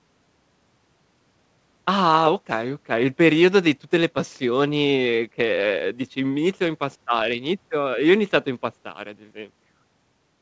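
No technical faults are audible.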